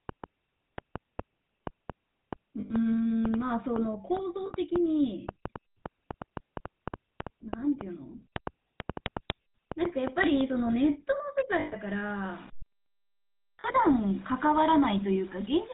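The whole clip runs through the GSM full-rate codec, so the speech has that buzzy, gravelly texture and nothing above 4 kHz, which fits a 13 kbps voice channel.

From 0.09 to 10.42 s there's a train of clicks, about four a second at an uneven pace, roughly 40 in all and about 15 dB above the speech. It's likely interference or a faulty connection.

Lost GSM frames show up at 2.60 to 2.74 s (100 ms), 4.46 to 4.52 s (40 ms), 11.60 to 11.75 s (120 ms) and 13.60 to 13.65 s (40 ms). Each time, the last good frame gets repeated and the sound hangs as a short, metallic ring.

From 11.88 s to the end, the speech turns grainy and gritty, with distortion around 25 dB below it that tracks the signal. That's low bit depth without dither, likely about 6 bits with rounding.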